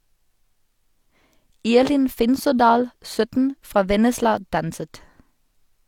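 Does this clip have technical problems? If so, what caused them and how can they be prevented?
Yes. Low-bitrate audio saved at a high bitrate affects the whole clip. The speech keeps the artefacts of a heavily compressed source, and nothing is present above 18.5 kHz. The likely cause is a file first encoded at a low bitrate, which fits a 40 kbit/s HE-AAC stream, then re-saved as a high-bitrate MP3. The second encoding cannot restore what the first discarded. To prevent it, encode from the original uncompressed recording.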